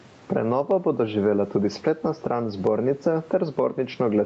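Speech with gain pumping throughout: the gain swings by roughly 15 dB, unlike a noise gate, which cuts gaps to silence. Gain set far too high into a fast limiter is the likely cause.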